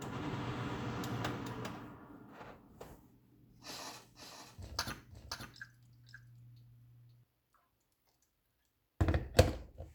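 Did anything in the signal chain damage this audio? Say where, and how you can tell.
Yes. From 4.15 to 7.23 s every sound repeats about half a second later, about 5 dB quieter and dry: a doubled audio track, likely from a second, delayed capture path or a misaligned edit.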